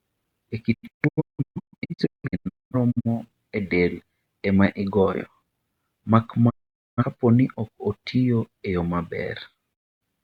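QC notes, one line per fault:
0.73–3.07 s, digital broadcast dropout: speech breaks up into a string of short silent holes, each fading out and back in over 20 ms, with about 1.4 s missing in all and the longest gap about 0.21 s. The receiver muted whenever frames failed, which fits frames of roughly 43 ms, and that audio is gone.
6.49–7.04 s, digital broadcast dropout: about 0.47 s muted in all.
9.73–10.03 s, digital broadcast dropout: about 0.26 s muted in all.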